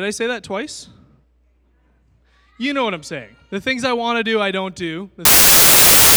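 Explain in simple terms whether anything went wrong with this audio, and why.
A wrong sample width fault starts at 5.25 s, right after "do I don't do", and lasts until the clip ends. From that point the audio was read back in different-sized pieces than it was stored in, which fits 32-bit samples being read as 24-bit ones. Many of the rebuilt values mix bytes from neighbouring samples, so you hear harsh, loud noise with the real speech faintly underneath, and the sound plays at about three-quarters speed, slower and lower in pitch.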